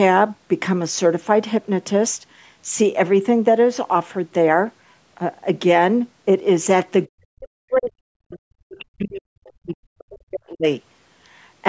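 From 7.09 s to 10.66 s the speech is repeatedly pushed down, in pieces that add up to about three seconds, with the deepest dips reaching roughly 40 dB so that parts of it nearly vanish. The likely cause is speech suppressed in double talk: with both ends talking at once, the echo canceller could not tell the local talker from loudspeaker echo and attenuated both. The call microphone path carries nothing above 8 kHz.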